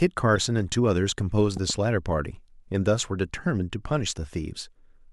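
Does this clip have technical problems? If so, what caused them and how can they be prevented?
Yes, there are two. From 0.36 to 0.38 s there's a short glitch, which is a corrupt frame decoded. A single compressed frame arrived with flipped bits, and the decoder played it anyway, so misread gains and codes dumped energy into the wrong frequencies for roughly one frame's length. It peaks around -20 dBFS. Error-checked transport with the decoder set to conceal bad frames rather than play them would prevent it.

Between 1.57 and 1.72 s you get a loud pop, actually two in quick succession, sitting a few dB above the speech while it carries on underneath. The likely cause is a voltage step or pulse from a plug, a switch, static or a driver glitch, with the downstream circuitry shaping it. Securing connections, avoiding switching or plugging mid-take, and controlling static would prevent it.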